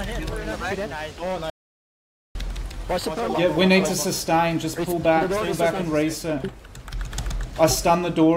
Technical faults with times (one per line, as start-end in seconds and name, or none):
1.50-2.35 audio dropout to silence